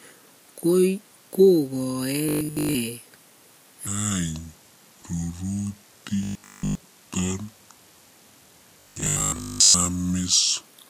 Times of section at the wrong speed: 3.87-10.66

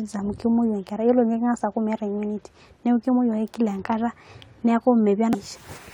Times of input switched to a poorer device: none

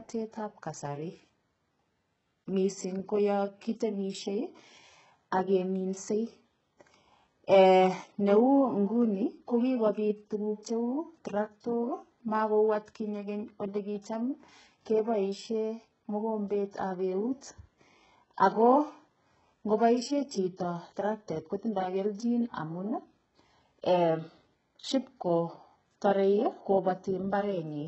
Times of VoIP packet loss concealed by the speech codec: none

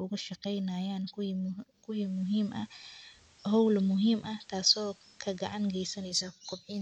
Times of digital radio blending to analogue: 1.80-6.35

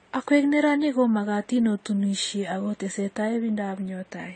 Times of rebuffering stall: none

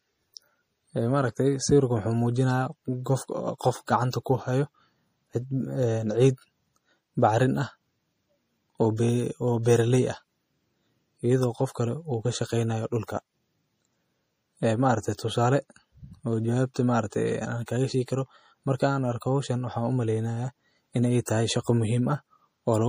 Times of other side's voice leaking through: none

